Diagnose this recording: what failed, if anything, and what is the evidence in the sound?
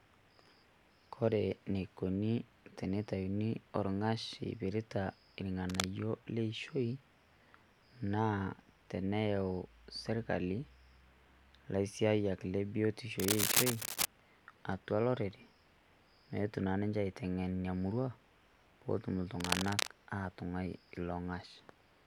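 Cable scratch noise shows the analogue wiring stage failing at 5.69–5.85 s, 13.19–14.05 s after "laisiyaak le biotisho", and 19.40–19.88 s, about as loud as the speech. Likely a moved worn connector with rapidly changing contact resistance. Dense, uneven rustling bursts set it apart from isolated digital clicks.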